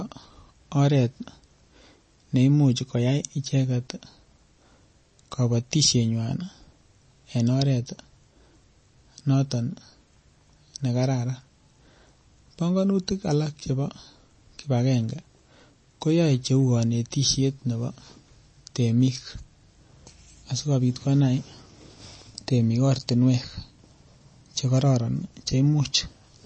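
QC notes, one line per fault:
throughout, MP3 compression: a likely low-bitrate MP3 encode, consistent with about 32 kbps, ran short of bits, so the treble was cut and weak frequency lines flicker between frames. Nothing sounds above 8.3 kHz, and the speech carries a plainly audible watery swirl.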